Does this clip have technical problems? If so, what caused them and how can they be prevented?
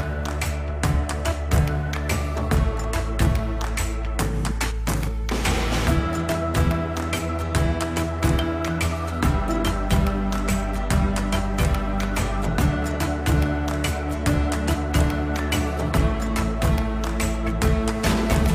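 No, nothing in the audio points to a technical fault, so there is nothing to trace or prevent.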